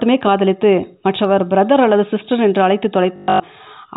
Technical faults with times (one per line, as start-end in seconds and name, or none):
3.16-3.40 packet loss with last packet repeated